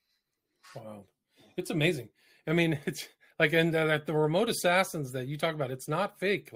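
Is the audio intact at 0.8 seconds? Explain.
Yes, the speech at 0.8 s plays through intact, with no dropout, click, distortion or other fault at that moment.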